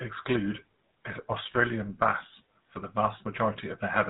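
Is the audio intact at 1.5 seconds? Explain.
No. The whole clip carries GSM full-rate codec damage: the pulse-driven vocal-tract model strips everything above 4 kHz, leaving a clearly buzzy, gravelly edge that fits 13 kbps. Right after, from 1.52 to 1.55 s, there's a lost GSM frame: the decoder repeats the last good frame's settings, so you hear a brief rough, metallic ring, about one 20 ms frame's worth.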